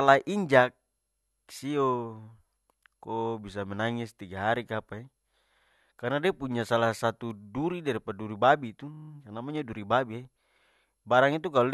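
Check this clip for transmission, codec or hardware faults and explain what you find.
Two faults are present: repeated frames, twice, and a single bit error spike.

From 5.59 to 5.70 s and again from 8.94 to 9.09 s, compressed frames were delivered more than once, so the decoder replayed them. The first event loops a 52 ms block twice, which fits two frames. The second loops a 26 ms block six times, which fits one frame. Each is heard as a stutter in the speech. Together they add about 0.26 s to the clip.

At 7.31 s, one sample was hit by a bit error spike. A flipped bit made its value jump by a power of two and then snap back, which is heard as one sharp, broadband tick with no relation to the speech.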